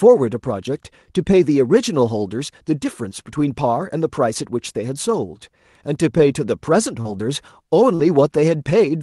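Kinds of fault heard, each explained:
Short concealed packet loss: near 7.0 s and 7.9 s, roughly 40 ms of audio arrived too late, so the decoder extended the preceding sound, leaving a brief smear.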